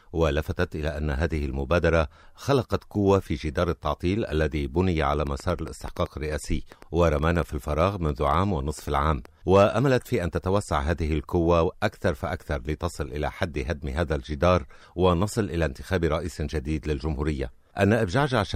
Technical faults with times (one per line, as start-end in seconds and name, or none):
5.14-9.26 train of clicks